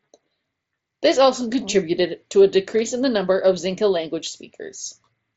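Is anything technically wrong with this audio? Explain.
No, nothing in this speech clip is technically wrong. It has the sound of a wideband Bluetooth headset link using the mSBC codec, with nothing above about 7.7 kHz and only the light coding texture that codec leaves on speech.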